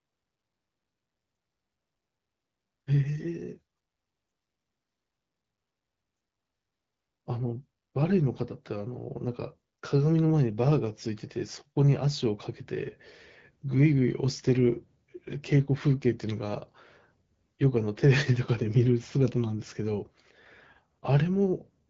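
Nothing stood out on listening to this speech, which comes through the AMR wideband (HD Voice) path at 12.65 kbit/s.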